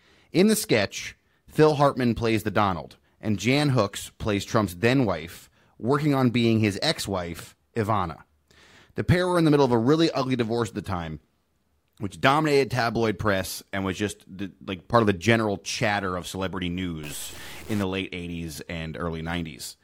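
A speech recording in which one data bit likely stuck at a fixed value from 17.03 to 17.83 s, just after "general chatter of celebrity", offsetting samples by about -35 dBFS and producing harsh, buzzy stuck bit distortion.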